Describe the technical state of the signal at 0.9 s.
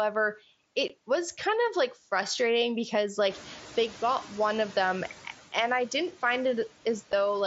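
At 0.88 s there is a single unconcealed Bluetooth headset packet loss. A hole of about 15 ms, which fits two lost mSBC frames, was filled with silence or an idle pattern instead of being patched over, so the speech breaks with hard, abrupt edges rather than smeared or repeated sound.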